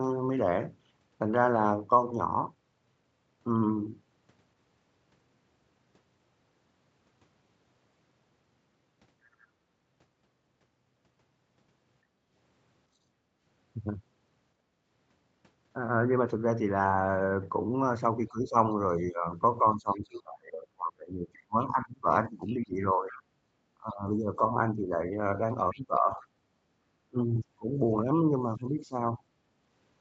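At 2.11 s there's a skip ahead: the playback jumps straight over roughly a third of a second of speech with no gap at all, so the two sides butt together and a chunk of the talker just vanishes. That kind of drop happens when a stretch of audio is discarded, in transit or by an overfull jitter buffer, while later audio is already queued and ready to play.

Right after that, from 2.37 to 3.36 s, you get jitter buffer speed-up. The receiver was sitting on more audio than it wanted and trimmed it back by cutting out tiny pitch-period slices over and over, about a tenth of a second in total. Speech runs at 111% speed there but keeps its pitch, so it just sounds a little rushed.

At 9.41 to 9.47 s there's a brief scrap of the other side's voice leaking through, very faint at around 35 dB under the talker. It's likely loudspeaker sound on the talker's end that the echo canceller didn't fully strip from the mic. 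It comes back later at 19.95 to 20.21 s (about 30 dB down), 21.61 to 23.22 s (the loudest, about 20 dB down) and 25.70 to 26.25 s (about 25 dB down), and in those spots there's a second voice under the main one.

Between 12.11 and 13.40 s the background is gated by the echo canceller. While the loudspeaker was active, the canceller clamped the mic down, so the room tone dips by up to about 9 dB, totalling maybe 0.4 s. Then it releases. It happens again at 14.64 to 14.83 s, a shorter but deeper dip of about 13 dB, and the ambience drops and comes back.

The long one runs from 18.28 to 29.27 s: speech suppressed in double talk. With both sides talking at once, the echo canceller likely couldn't tell the local talker from the far-end echo and turned everything down. The talker's speech dips or cuts out in pieces, as much as 25 dB or so, adding up to around 5 s of chopped or pulled-back speech, overlapping those leak spots. 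Nothing above 8 kHz comes through, from the mic processing and the Opus call path.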